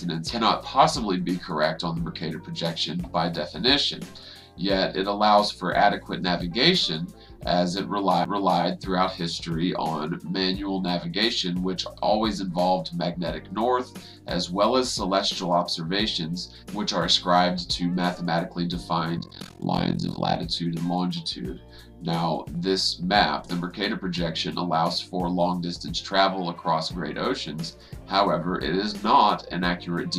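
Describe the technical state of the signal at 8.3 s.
A CD skip occurs at 8.25 s, just before the requested moment. A knock or disc flaw has thrown the laser onto another turn of the spiral, so playback mutes for only a few milliseconds and resumes from another point in the sound, heard as a tick and an abrupt discontinuity. On the waveform, a brief flat gap sits between two unrelated segments. A spectrogram shows a thin vertical broadband line where the content changes suddenly.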